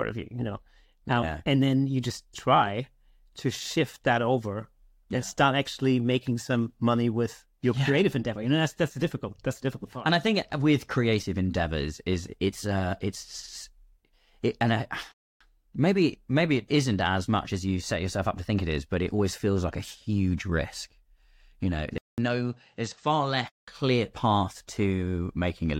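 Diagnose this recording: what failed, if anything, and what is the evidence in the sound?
A rebuffering stall at the playback stage starts at 15.12 s. The speech cuts to silence and resumes at 15.41 s from exactly the point where it stopped, so no audio is lost, but 287 ms is added to the timeline. This is what happens when the player drains its buffer of downloaded audio and has to wait for the network to deliver more before it can continue.

Between 21.98 s and 23.68 s the speech changes character. A 200 ms silence marks the change, and after it nothing is present above 8.3 kHz, so the sound turns duller. The level falls by around 5 dB, and a different noise floor appears roughly 45 dB below the speech. The likely cause is the input switched to a poorer device at the driver stage, with a narrower-band microphone or headset path bringing its own tone, gain and noise.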